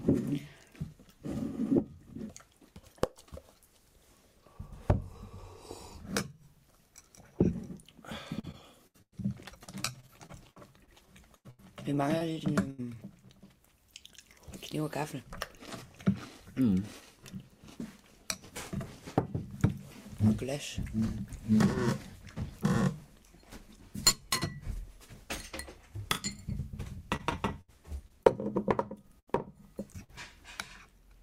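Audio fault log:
8.39–12.80 s, repeated packet loss (robotic sound): fifteen separate gaps, the longest 98 ms, with about 0.68 s patched in place of 0.72 s of missing audio, roughly 15% of the stretch. Each hole is filled by extending the preceding sound before the next loss arrives, so the audio turns choppy, with fragments missing.
27.16–28.27 s, repeated packet loss (robotic sound): the same pattern over a shorter span. Five gaps, the longest 69 ms, with 155 ms of continued sound covering 140 ms that never arrived, about 14% of the span, giving a brief run of broken, choppy texture.
29.07–29.11 s, 29.93–29.96 s and 30.04–30.10 s, short concealed packet loss: hundredths of a second went missing each time (20, 20 and 40 ms). The receiver carried the previous sound forward across each hole and blended back in, leaving a quick smear or wobble where detail dropped out.
29.19–29.29 s, burst of packet loss: 80 ms of audio was lost, covered by 77 ms of concealment. 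The last sound is stretched and faded over the gap, heard as a held buzz or dying hiss, and playback then resumes with that section absent.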